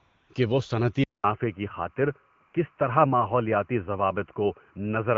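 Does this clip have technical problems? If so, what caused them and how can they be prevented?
Yes. Linear timecode running at 30 frames per second is leaking into the audio path from a neighbouring track or cable throughout the clip. Its square wave flips between tones around 1 kHz and 2 kHz, so a steady chirping warble sits behind the speech at a level of about 40 dB below it. It is faint, but it never stops. To prevent it, keep timecode on a separate, well-screened cable and track, away from the audio lines.

The phone's voice activity detection judged the talker silent and stopped sending speech frames, so the receiver generated AMR comfort noise from a coarse level-and-spectrum description. This happens for the first 0.29 s, before "کہ وہ صنعتی", again from 2.47 to 2.53 s, and briefly at 2.76 s. In those spans the real background is replaced by smooth, synthetic noise that switches in and out, which can clip soft edges of the sound. 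To prevent it, disable discontinuous transmission on the call, or record at the source rather than over the network.

At 1.04 s, just after "کہ وہ صنعتی", the system likely switched its input to a poorer device, such as a headset in call mode. There is a 200 ms silence at the changeover. From there to the end, nothing above 3 kHz gets through, so the sound turns dull and boxy. The new device also brings its own background noise, though that sits far below the speech, and loudness stays about the same. The AMR-WB coding at 12.65 kbit/s still carries the narrowed signal cleanly. To prevent the switch, lock the recording input to one microphone and stop the system from changing devices automatically mid-session.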